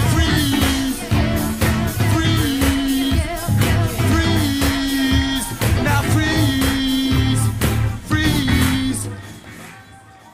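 No technical faults can be heard anywhere in the signal.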